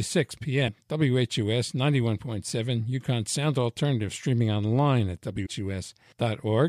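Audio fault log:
0.67 s and 5.45 s, compressed frames skipped. Whole frames of the compressed audio never play, so the speech jumps ahead by roughly half a second, then about 150 ms just after "streaming online". The jumps fit frames of about 26 ms. Overlapping frames smear each join into a brief blip, not a click.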